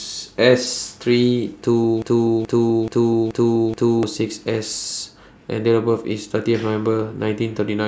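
From 2.02 s to 4.03 s the speech stutters on a single fragment about 0.43 s long, which plays five times back to back with identical timing and content, like a stuck record. This broken-record loop is likely caused by the player, encoder or stream stalling and resending the last chunk it held in its buffer. Whatever speech belonged in those two seconds is gone, and the clip resumes after the gap.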